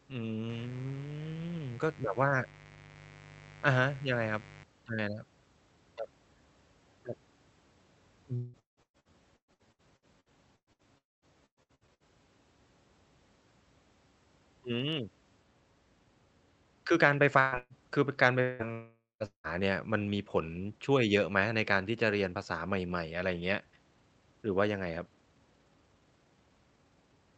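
Mains buzz runs from 0.49 to 4.64 s. Sharp switching spikes from the 50 Hz supply leak into the signal twice per cycle, stacking harmonics up into the kilohertz range. The result is a steady, raspy buzz about 20 dB below the speech.

Repeated packet loss (robotic sound) sets in from 8.35 to 10.87 s. Packets go missing again and again, and each hole is patched by extending the previous sound before the next hole arrives. Gaps reach 180 ms, and roughly two fifths of the stretch is concealment, so the speech turns choppy.

A long network dropout follows at 10.98–11.25 s, likely from audio failing to arrive for about a quarter second. The last sound is stretched into a fading buzz or hiss, then about 210 ms of silence, and the speech resumes with that portion gone.

Repeated packet loss returns from 11.46 to 12.03 s, with gaps up to 110 ms. About half of that span is concealment, which gives it the same robotic, broken texture.

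A burst of packet loss hits at 17.40–17.55 s and again at 17.58–17.73 s. About 120 ms goes missing each time. The receiver holds the last sound as a buzz or hiss that fades, and the speech then jumps ahead past the lost piece.

Further long network dropouts occur at 18.42–18.68 s, 18.72–19.23 s and 19.26–19.47 s. The first lasts about 180 ms and is covered entirely by a fading continuation. The second loses nearly half a second and ends in about 160 ms of silence. The third loses about 180 ms with roughly 100 ms of silence. Throughout the clip, the call-codec path limits the audio to about 8 kHz bandwidth.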